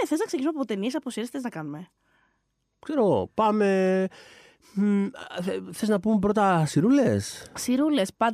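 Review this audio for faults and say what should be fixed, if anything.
No faults found in the speech; nothing needs fixing.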